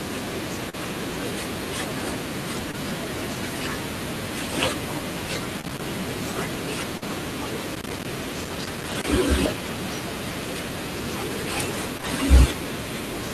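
Short concealed packet loss at 0.69, 2.71, 5.61, 6.97, 11.97 and 12.01 s. Speech between 20 and 40 ms never arrived. The receiver extended the preceding sound, leaving brief smears or wobbles. Loose connector crackle runs from 5.29 to 5.81 s and 7.75 to 9.08 s. A failing contact chops the signal into irregular scratchy bursts. Inside that second burst, at 8.89 s, a lost packet rebuilt from error correction covers 40 ms across two packets. Another covers 20 ms at 12.05 s. These low-bitrate copies leave no gap but sound rougher and noisier.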